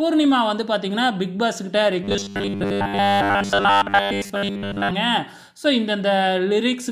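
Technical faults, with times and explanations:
2.04–4.91 s, robotic sound from repeated short buffers: the sound turns into a rigid, metallic 100 Hz buzz that only loosely tracks the original. The likely cause is new audio arriving too slowly, so a 10 ms fragment was looped for roughly 70% of this stretch.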